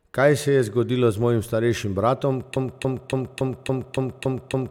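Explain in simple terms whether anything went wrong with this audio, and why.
Something went wrong at 2.56 s, right after "z mojim starejšim bratom". A broken-record loop starts there. A snippet of about 0.28 s repeats eight times, back to back, until the end. The likely cause is a stall in playback or streaming. The missing speech is lost.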